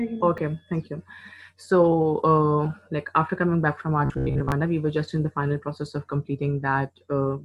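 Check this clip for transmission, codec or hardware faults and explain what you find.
Two faults are audible, one brief dropout and one stretch of buzzy, mechanical sound.

At 0.38 s there is a block of digital silence about 4 ms long. Samples in that span were replaced by zeros, typically because the output buffer was not filled in time. The signal drops to zero and returns with no fade, so the abrupt edges fuse into a single sharp tick rather than an audible hole, since the gap is far too short to register as a pause.

From 4.05 to 4.52 s the audio takes on a robotic sound from repeated short buffers. The likely cause is new audio arriving too seldom, so the playback path loops the most recent fragment to cover the shortfall while the real material in between is skipped. Most of this half-second is made of such repeats. The repetition imposes a fixed buzz at about 66.8 Hz, which fits a repeated segment of roughly 15 ms. 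The result is a rigid, metallic drone that only loosely follows the underlying sound.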